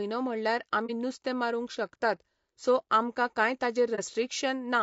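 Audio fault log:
throughout: low-delay AAC compression. The speech sounds rough and grainy. Noise fills the gaps between the harmonics, and the top band sounds thin and partly synthetic. The damage is plainly audible. The likely cause is AAC-ELD, the low-delay AAC used in video calls. Its short frames separate pitch harmonics poorly and spend bits quickly. At a modest rate, which fits about 32 kbps, the fine harmonic detail is lost.
0.86–0.91 s and 3.95–4.00 s: AAC frame loss with muting. Each time, one frame of about 30 ms is missing, and the speech briefly drops into a short, soft-edged hole. The decoder filled the lost frame with silence. Its overlapping windows fade the sound down and back up over roughly a frame, so each gap runs slightly longer than the loss itself. The edges are smoothed.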